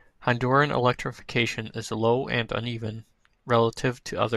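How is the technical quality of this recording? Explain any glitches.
Nothing in the recording stood out as a technical problem on listening, so there are no glitches to explain.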